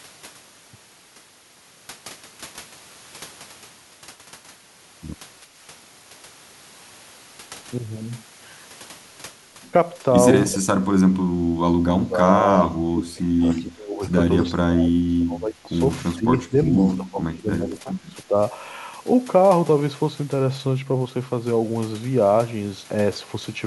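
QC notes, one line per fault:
10.52–12.48, 12.64–14.04, 14.55–15.81, 16.13–16.84 and 17.00–18.37 s, speech suppressed in double talk: the talker's level repeatedly dips by about 20 to 30 dB, likely the echo canceller turning down the talker along with the loudspeaker echo. These are gain pumps spread over seconds, not sharp packet-loss gaps.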